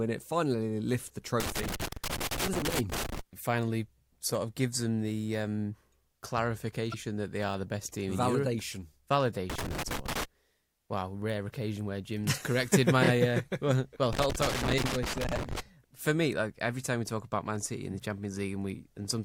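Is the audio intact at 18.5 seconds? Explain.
Yes, at 18.5 seconds the speech plays through intact, with no dropout, click, distortion or other fault at that moment.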